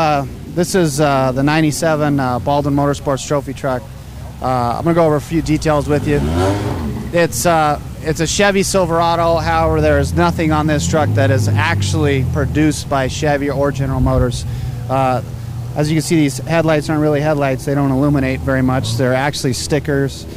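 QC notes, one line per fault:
Throughout, low bit depth without dither: grainy error follows the sound, about 30 dB below it. This likely comes from rounding to 7 bits without dither.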